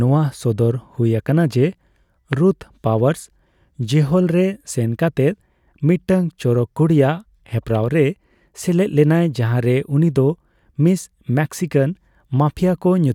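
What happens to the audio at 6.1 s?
Nothing goes wrong at 6.1 s; the speech carries on intact through that moment with no dropout, click, distortion or other fault.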